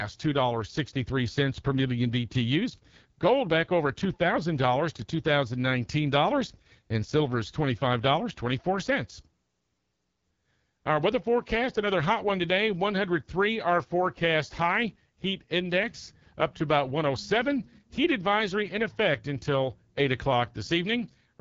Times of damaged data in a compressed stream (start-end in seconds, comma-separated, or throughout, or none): none